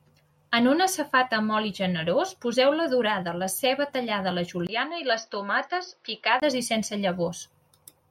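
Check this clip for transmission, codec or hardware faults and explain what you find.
One fault turns up in this speech clip. Input switched to a poorer device, 4.67 to 6.42 s: the speech likely moves to a narrower-band microphone that passes nothing above 6 kHz. After a 20 ms gap it turns dull and boxy at similar level, over faint new background noise, then clears.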